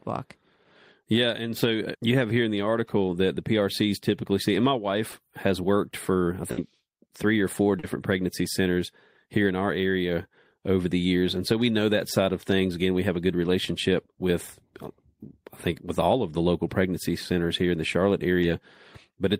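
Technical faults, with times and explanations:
5.11 s, 7.79–7.84 s, 12.09–12.11 s, 18.42–18.44 s: short concealed packet loss. Between 10 and 40 ms never arrived, so the receiver extended the preceding sound. This leaves brief smears, such as just before "pregnancy centers here in".
6.51–6.58 s: burst of packet loss, right after "has worked for I". About 60 ms dropped out and was bridged by a fading continuation, so the sound turns into a held buzz or hiss before resuming.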